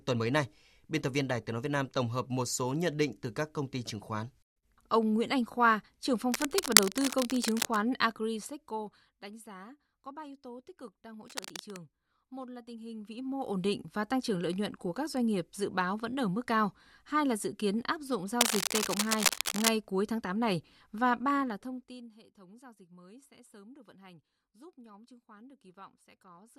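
From 6.31 to 7.78 s a dense, uneven scratching and rustling sits over the speech, roughly as loud as the speech itself. The same cable scratch noise returns from 11.28 to 11.78 s, just after "tích cực đang hỗ", and from 18.41 to 19.69 s, between "dự kiến áp dụng" and "cuối tháng". This is likely a worn cable, connector or control being moved, its contact resistance jumping about and spraying bursts of noise into the signal.

From 8.04 to 9.30 s, ending just before "giá có", the level drops by roughly 15 dB with a fine ticking or zipping running underneath as it falls. This is zipper noise: the gain is applied in coarse steps, around fifty per second, with no smoothing, so each jump leaves a small click. It recurs from 12.84 to 13.65 s as the level rises by about 15 dB, and from 21.36 to 22.17 s as it falls by about 25 dB in steps of about 1 dB.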